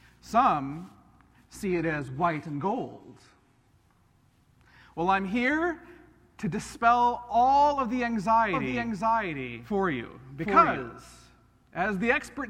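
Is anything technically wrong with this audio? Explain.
Yes, there are two faults. From 1.67 to 3.67 s, the adaptive stream drops to a lower bitrate, consistent with a switch to a low-rate HE-AAC version: treble above 12.3 kHz disappears, abruptly and without a gap. From 8.53 to 10.93 s there is a doubled audio track: a full-band copy at roughly equal level trails by about 0.7 s, starting and stopping abruptly, likely from a second, slower capture path.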